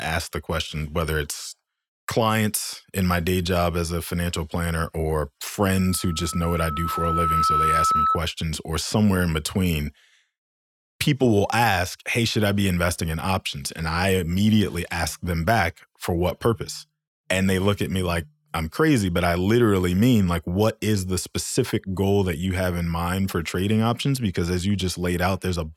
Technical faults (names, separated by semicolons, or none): loudspeaker feedback squeal